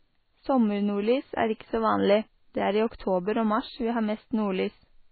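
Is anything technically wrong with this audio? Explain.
Yes. Throughout the speech, nothing is present above 4.5 kHz and the sound is heavily watery and swirly. That is likely MP3 compression at a very low bitrate, around 16 kbps: the encoder cuts the treble and drops weak frequency lines frame by frame.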